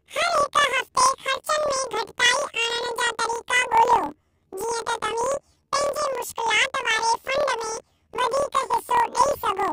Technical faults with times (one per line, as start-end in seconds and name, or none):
0.00-9.73 planar audio read as interleaved